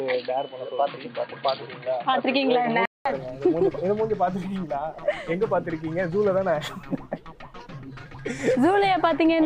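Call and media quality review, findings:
Input switched to a poorer device, 0.00 to 3.05 s: dull, band-limited sound, nothing above 4.6 kHz, own noise floor roughly 35 dB down, level steady. A 0.2 s silence at 3.05 s, then full band. The gap and noise change, not a plain filter, point likely to a device switch.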